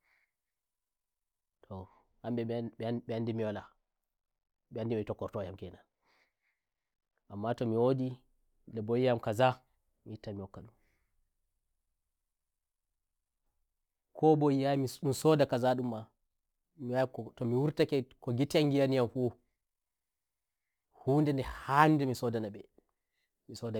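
From 14.74 s to the end of the speech, crude rate conversion adds a gritty, inharmonic fizz, around 30 dB below the voice, that rises on loud and sibilant sounds. It fits samples being repeated to stretch 44.1 kHz to 48 kHz with no filter. Unlike steady hiss, it tracks the signal.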